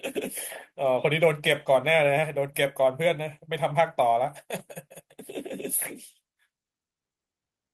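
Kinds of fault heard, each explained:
No faults can be heard in this speech. It has the sound of a WebRTC call path: the high frequencies stop at 12 kHz, and the coding texture fits Opus at around 24 kbps.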